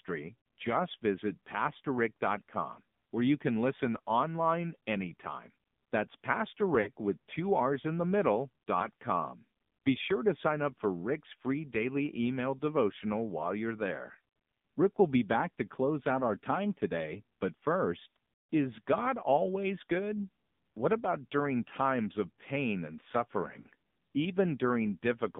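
The whole thing comes through the AMR narrowband mobile codec, and the damage is plain to hear. The speech sits in a tight band from about 150 Hz to 3.6 kHz, with nothing airy on top. There's a buzzy, synthetic edge to it that fits one of the lower AMR-NB modes, around 7.4 kbps. The codec rebuilds the voice from a vocal tract model and a few pulses rather than sending the waveform, and that is where the buzz comes from.

There are four spots with lost AMR speech frames. At 0.40 to 0.46 s, a 60 ms gap, which fits three 20 ms frames, gets smeared over. The decoder keeps repeating the last good pitch and tract settings while it turns the gain down, so the sound stretches and sags. Then there are shorter dips at 6.82 to 6.90 s (40 ms) and 8.80 to 8.88 s (20 ms, a single-frame warble), and another 40 ms dip at 23.60 to 23.67 s. Each time, the voice comes back weak or rough for a moment.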